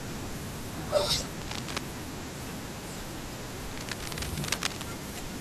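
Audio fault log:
1.42 to 1.79 s and 3.71 to 4.83 s, cable scratch noise: Dense, uneven bursts of crackling noise sit over the speech. The first burst is short and a few decibels below the speech. The second lasts about a second and is roughly as loud as the speech. The likely cause is a worn cable, connector or control being moved. Its contact resistance then jumps about rapidly. That produces the ragged, rustling scratch heard here.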